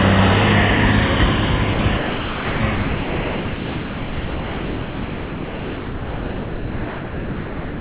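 At 1.73 s the sound gives way to steady comfort noise for 60 ms. It drops again from 1.97 to 2.6 s, then from 2.75 s to the end. This is likely sound dropped by the voice detector, which mistook it for background and stopped sending.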